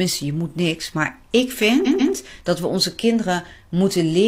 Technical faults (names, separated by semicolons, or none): repeated frames